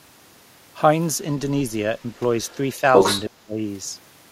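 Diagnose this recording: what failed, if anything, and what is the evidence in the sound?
Other side's voice leaking through, in call processing. A faint second voice appears at 2.44–2.56 s, far below the talker, then returns from 2.93 to 3.23 s at roughly 5 dB above the talker. It is a separate voice, not a delayed copy of the talker, so it is likely loudspeaker echo the echo canceller left behind.

Speech suppressed in double talk, also in call processing. From 3.29 to 3.59 s, right as the other side is talking, the talker's voice sinks by around 25 dB for about 0.3 s. A network dropout would cut to silence regardless of context. This dip coincides with the overlap, likely the canceller turning everything down because it cannot separate the talker from the echo.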